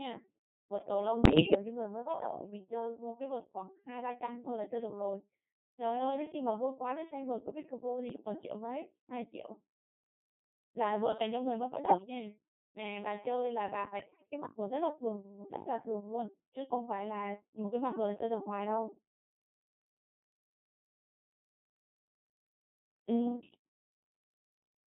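Codec 2 vocoder runs through the whole clip. Only pitch, voicing, energy and a spectral envelope are sent, and the speech is rebuilt from sine waves, so it sounds heavily robotic and buzzy, confined to about 150 Hz to 3.7 kHz, which fits a 2.4 kbit/s mode.

Bit errors on digital voice radio strike at 1.21 to 1.54 s, 8.10 to 8.25 s, 11.86 to 12.06 s and 14.00 to 14.31 s. Flipped bits, a few percent of them, corrupt whole frames' pitch, level and spectrum parameters, so the voice lurches in pitch and loudness and breaks into warbling, bleeping gibberish.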